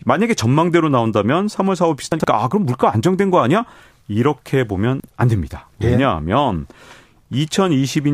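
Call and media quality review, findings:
Jumbled stutter in the speech at 2.12–2.24 s and again at 5.00–5.08 s. Chunks out of order: a 40 ms chunk plays late, after two chunks at 2.12 s and one at 5.00 s, leaving three hard joins each. Nothing is lost. Likely jitter-buffer reordering.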